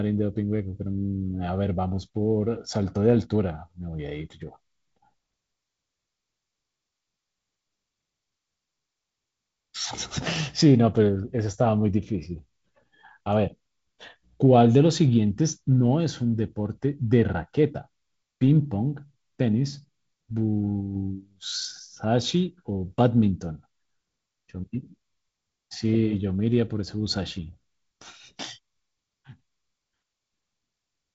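A speech recording carried over G.722 wideband telephone coding, with nothing technically wrong with it.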